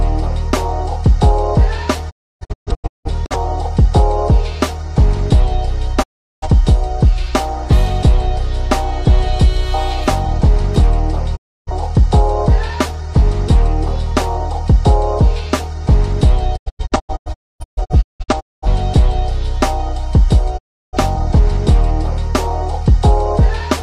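At 2.09 to 3.36 s the sound breaks into several short silences. This is a digital broadcast dropout. The receiver muted whenever frames failed, fading out over 20 ms each time. About 0.77 s is lost, with the longest hole 0.3 s. Single clean mutes follow at 6.02 to 6.47 s, 11.35 to 11.71 s and 20.57 to 20.97 s. From 16.56 to 18.67 s there is another scattered stretch, losing 1.24 s. Nothing sent during the gaps returns.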